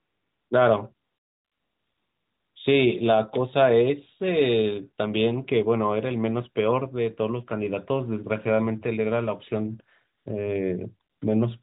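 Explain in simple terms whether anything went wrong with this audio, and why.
Yes, something went wrong. The fault is AMR comfort noise. At four moments the phone decided nobody was talking and stopped sending the real sound: 0 to 0.50 s, 0.94 to 2.56 s, 10.18 to 10.26 s, and 11.10 to 11.22 s. The receiving end filled each gap with made-up, smooth hiss instead of the true background. You hear it switch in and out. The longest patch lasts about a second and a half. The phone-line sound itself stays narrow, as a mobile call normally does.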